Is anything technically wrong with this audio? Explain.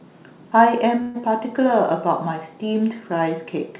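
Yes. From 1.02 to 1.22 s there is a call audio freeze. The last sound is stretched into a fading buzz or hiss for about 124 ms, then the speech resumes where it stopped, with nothing lost. This is likely packets held up in transit emptying the jitter buffer. The narrowband call path, with nothing above 4 kHz, fits G.711.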